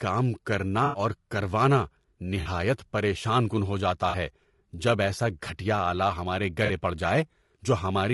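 Throughout the speech there is a rough, grainy texture: noise sits between the voice harmonics, and the top band sounds thin and synthetic. This is most likely low-delay AAC compression of the AAC-ELD kind used in video calls. Its short frames resolve pitch harmonics poorly, so at a constrained bitrate the encoder cannot keep the spaces between harmonics clean. The level of damage points to a low rate of around 32 kbps.

AAC frame loss with concealment occurs four times. The first loss runs from 0.85 to 0.99 s, about 80 ms, which fits four frames of 20 ms. The other three are each about 40 ms long, at 2.41 to 2.47 s, 4.09 to 4.15 s and 6.65 to 6.71 s. At each gap the decoder rebuilds the missing audio from the last good spectrum. The result is a brief smeared, noisy or phasey patch in place of clean speech.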